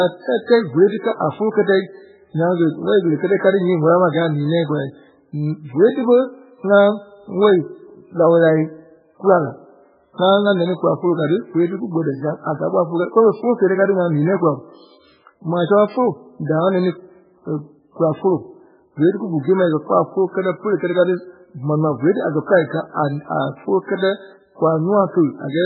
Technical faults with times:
0.00-25.66 MP3 compression

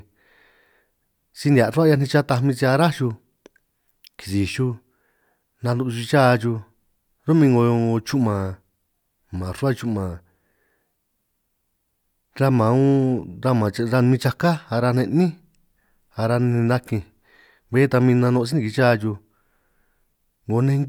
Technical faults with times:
none

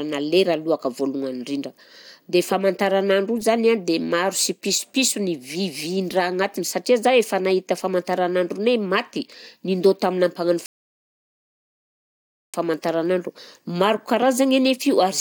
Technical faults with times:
10.66-12.54 rebuffering stall

